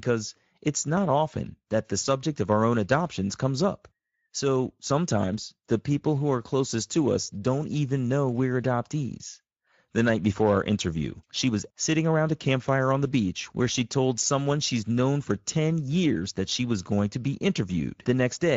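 From start to finish the speech carries Speex codec damage, and it is plainly audible. This CELP codec is starved of bits for the excitation signal. The voice turns rough, hoarse and noisy. The sound fits a bitrate near 17 kbps.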